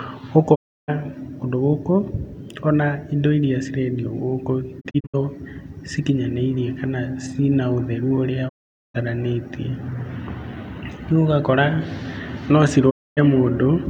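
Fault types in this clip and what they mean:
digital broadcast dropout: The receiver stopped getting frames it could decode, so it muted the speech with a quick 20 ms fade and brought it back only once clean frames arrived again. Whatever was broadcast in between is gone. Silent holes open at 0.54, 8.48 and 12.89 s, lasting about 0.32, 0.45 and 0.26 s. Near 4.8 s the sound instead breaks into several short gaps, none longer than 64 ms, spread across 0.32 s.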